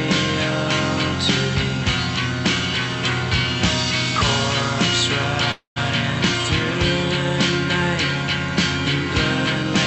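At 5.51 s the sound stalls until 5.78 s, stretched into a fading buzz that ends in 130 ms of silence. Unlike a dropout, this call audio freeze skips nothing. The audio resumes where it stopped, 246 ms late, likely because delayed packets emptied the jitter buffer.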